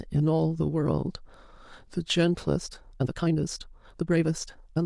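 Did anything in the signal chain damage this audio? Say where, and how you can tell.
Yes. From about 2.54 s right through to the end, the speech suddenly runs at roughly 1.72 times its earlier pace while the pitch holds steady, so it sounds rushed rather than chipmunky. That's a time-stretched section, likely done by software squeezing the tail to fit a set length after capture. To keep the pitch, it throws away short slices of the waveform and splices the rest together, and those joins are what give the hurried texture.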